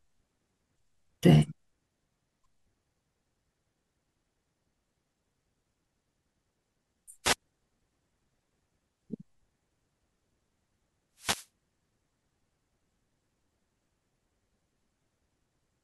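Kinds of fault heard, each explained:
Wireless microphone noise hit: the radio link from an analogue FM microphone faded, most plausibly because reflected copies of the signal arrived out of step and cancelled at the receiver. With the wanted carrier weakened, the receiver's own noise rose into the output. It shows as two short bursts of static over the speech, at 7.23 to 7.36 s, about an eighth of a second, and at 11.15 to 11.49 s, about a third of a second.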